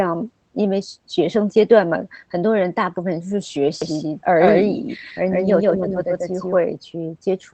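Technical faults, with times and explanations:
2.59 s, 4.47 s and 5.95 s: lost packet rebuilt from error correction. At each moment a single 20 ms packet went missing, and the decoder filled it with the low-bitrate copy carried in the next Opus packet. The sound never drops out. Instead, each instant turns briefly grainy and rough. Concealment by guesswork would smear or buzz over the hole. Here the missing audio was recovered at lower quality.
3.82 to 6.58 s: doubled audio track. A second full-band copy of the speech runs about 150 ms behind the first, at roughly the same loudness, so every syllable is heard twice. Unlike an echo or reverb, the copy has no decay and no room colour. It switches on and off abruptly at the edges of the span. Two copies held out of step are the likely cause, from a second capture path or an edit.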